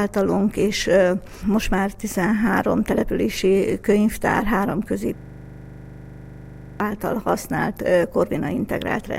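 At 5.18 s the system locks up in a system hang loop: the computer stalls while the audio hardware keeps replaying the same 40 ms buffer. That slice repeats 41 times at 25 Hz until 6.80 s, producing a harsh, rattling buzz.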